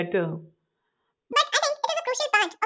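From 1.33 s to the end at 2.65 s, the audio suffers a wrong sample rate fault: the samples are clocked out twice as fast as they were captured, with no conversion between the two rates, which fits material recorded at 8 kHz being played at 16 kHz. The speech therefore runs at double speed and jumps a full octave, 12 semitones, sounding squeaky, chipmunk-like and rushed for the final stretch.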